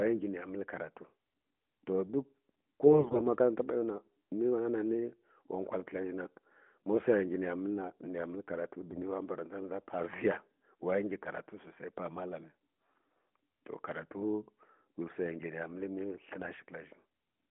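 From 2.86 to 3.22 s, and again from 8.81 to 9.01 s, AMR bit errors corrupt the narrowband mobile speech. Weakly protected frame bits flip, misplacing excitation pulses and skewing fine pitch, gain and spectral values. Pitch and level hold, but the voice turns hoarse and gargly, more so in the longer first burst.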